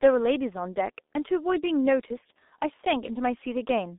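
From start to finish the speech carries heavy G.723.1 codec damage: nothing above 3.8 kHz, a band-limited line, and muffled, hoarse consonants that suggest a 6.3 kbit/s mode.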